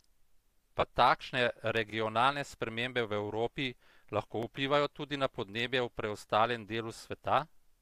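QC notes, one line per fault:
0.80 to 0.83 s, lost LE Audio frames. A gap of about 22.5 ms opens in the speech. That span fits three lost 7.5 ms frames. The decoder fills the hole by reusing the last good spectrum with random signs. What it plays is a brief noisy smear. The pitch and detail of the voice blur into hiss there. The loss is short, so the concealment never fades fully to silence. The light graininess of the Bluetooth LC3 link, likely 64 kbps, is faintly audible around it.
4.43 to 4.45 s, overlapping chunks. Just before "vplivajo tudi na podnebje", about 25 ms of audio plays twice. The next chunk began before the previous one ended. The two copies are joined at a single seam. That join is heard as a quick stutter. The chunks were about 2.5 s long, but only this one join is heard.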